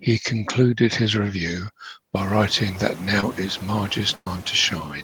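Noise suppressor artifacts run through the whole clip. The suppressor pulls down whatever bands it judges to be steady noise, frame by frame, cutting it by about 17 dB. Once the room noise rises, at around 2 s, the leftover noise dips between words and swells beneath them.

At 3.20 to 3.23 s, just after "review by writing that", there is a short concealed packet loss. About 20 ms never reached the decoder. The receiver extended the preceding sound to bridge it, leaving a brief smear.

A burst of packet loss follows at 4.15 to 4.27 s. About 110 ms went missing. The receiver filled roughly 107 ms by stretching the last sound and fading it, with about 40 ms dropping to silence. The voice then resumes further along, with that stretch gone.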